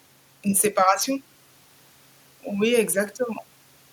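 Speech recording, no audible technical faults anywhere in the clip.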